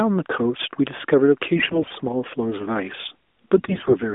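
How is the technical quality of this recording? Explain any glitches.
The recording is narrowband mobile-phone speech, band-limited to roughly 250 Hz to 3.6 kHz by the AMR narrowband mobile codec, with light coding coloration consistent with its highest-quality mode. Two short bursts of damage stand out.

AMR bit errors occur from 1.56 to 1.91 s and from 3.58 to 3.97 s. On a weak radio link, a large share of the less-protected bits in each frame arrived flipped (roughly a fifth in the first burst, somewhat fewer in the second). The checksum on the essential bits still passed, so the decoder played the frames with misplaced excitation pulses and wrong fine pitch, gain and spectral values. The voice keeps its pitch and loudness but turns hoarse, scratchy and gargly. That distinguishes it from lost frames, which would cause dropouts, repeats or fades.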